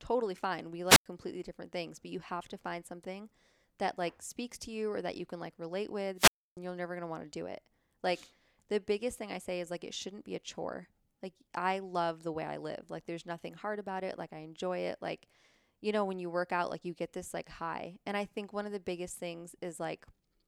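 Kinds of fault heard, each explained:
Wireless microphone squelch dropout: The radio link from an analogue FM microphone fades, so the receiver's squelch shuts off the output. Each event is a brief rise of hiss, then a hole of near silence. The first runs from 0.89 to 1.06 s, with a mute of about 96 ms before "different things but you". The second follows "you can like relate" at 6.16 s and lasts until 6.57 s. Its mute is longer, about 294 ms. Speech returns with "you're never going".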